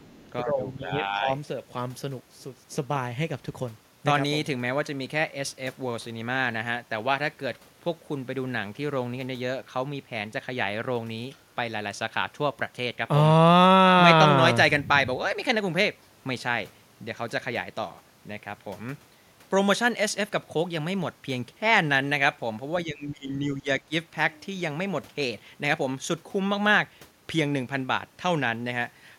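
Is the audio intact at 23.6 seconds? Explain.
No. From 23.55 to 23.68 s the speech is suppressed in double talk. The level drops by around 15 dB at its deepest, for roughly 150 ms in total. The sound dips before recovering. The likely cause is an echo canceller that heard both sides at once. It could not separate this talker from the loudspeaker echo, so it turned everything down together.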